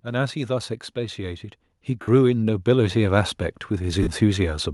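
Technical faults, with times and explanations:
0.05 to 4.61 s, automatic gain rising: the level climbs steadily across nearly the whole clip, by about 15 dB in total, with the speech and the background noise floor swelling together. The automatic gain control judged the input too quiet and kept raising its gain in slow steps rather than at once. Because one gain scales everything, the noise rises in step with the speech instead of staying put beneath it.
2.01 to 2.08 s and 4.02 to 4.07 s, lost LE Audio frames: two short holes, about 60 ms and 45 ms long, where clear speech gives way to a hissy, pitchless smear. Those lengths fit runs of eight and six 7.5 ms LC3 frames dropping out over the Bluetooth LE Audio link. The decoder fills each gap by repeating the last good spectrum with randomised signs, which keeps the rough energy but destroys the harmonic structure, and it fades that substitute away as the run of lost frames continues.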